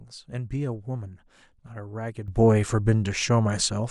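At 2.28 s a sudden gain jump lifts everything by about 12 dB until the end. Speech and background noise step up together, instantly, unlike a speaker growing louder or a smooth gain ramp. This is likely a gain setting applied without smoothing.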